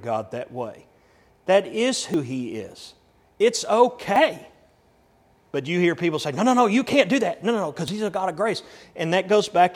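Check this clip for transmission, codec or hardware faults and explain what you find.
The speech jumps three times, at 2.14 s, 4.16 s and just after "no no" at 7.88 s, each with a small skip forward, roughly 40 ms of sound missing at the first and about 20 ms at the other two. The likely cause is a dropped buffer (overrun): samples were overwritten before being read, and the surrounding audio was butted together. Unlike an underrun, no silent gap appears; the sound simply lurches ahead.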